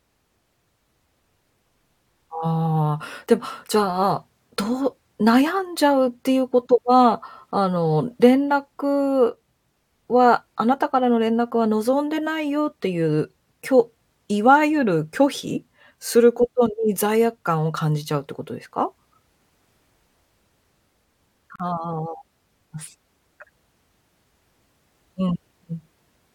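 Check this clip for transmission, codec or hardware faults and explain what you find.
One fault turns up, a gap at a join of encoded pieces. From 21.56 to 21.60 s the speech drops into a 40 ms gap with smeared edges. Two separately encoded segments were joined untrimmed, so encoder delay and end padding remain. Unlike a dropout, no sound is lost, and the speech resumes exactly where it stopped.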